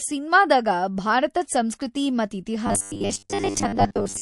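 A speech recording with plainly audible MP3 compression throughout: the band-limited, watery texture fits a low bitrate around 48 kbps, the likely cause being an encoder cutting treble and dropping weak spectral detail to save bits. From 2.67 s to the end, the sound turns into robotic sound from repeated short buffers, a rigid metallic buzz at 100 Hz that still loosely tracks the speech. That pitch points to a 10 ms block being replayed, likely because new audio arrived too slowly, with most of the signal in that stretch repeats rather than fresh audio.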